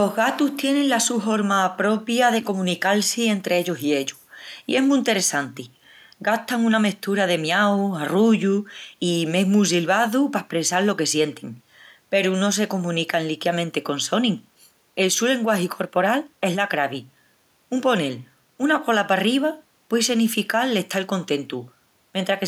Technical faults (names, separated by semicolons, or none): none